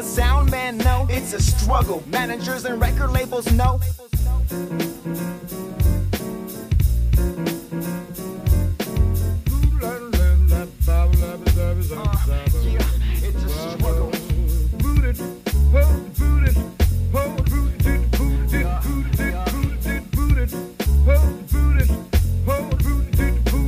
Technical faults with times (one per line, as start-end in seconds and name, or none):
none